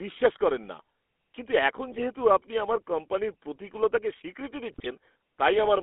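The whole clip has the buzzy, gravelly roughness of the GSM full-rate codec. Excitation is rebuilt from sparse regular pulses, so the voice turns coarse, and the band is limited to roughly 250 Hz to 3.4 kHz, which fits a 13 kbps GSM channel.

GSM bit errors appear twice. From 1.92 to 2.05 s, right after "করেন না কিন্তু এখন" and before "আপনি আমার কোম্পানির প্রতিকূলতাকে", corrupted filter, pitch and gain values produce a squawky, gargling burst. A second one runs from 4.70 to 4.87 s after "আমার কোম্পানির প্রতিকূলতাকে স্বীকৃতি".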